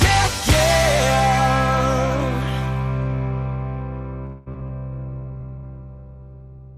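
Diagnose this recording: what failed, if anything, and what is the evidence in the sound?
Call audio freeze, 4.25 to 4.48 s, in the network stage: the last sound is stretched into a fading buzz for about 0.21 s, then playback resumes where it left off. The likely cause is delayed packets draining the jitter buffer, so a gap is inserted and nothing is lost.

Short concealed packet loss at 4.52, 4.60 and 4.67 s, again in the network stage: each is a brief smear or wobble where 20, 40 and 20 ms of audio never reached the decoder. The receiver extrapolated the preceding sound and crossfaded back into real audio.

Call bitrate drop from 4.91 s to the end, a codec stage reaction to a falling bandwidth estimate: the encoder rate falls from 96 to 16 kbps for the final 1.87 s. The sound becomes rougher and duller as Opus quantises coarsely and sheds high-frequency detail.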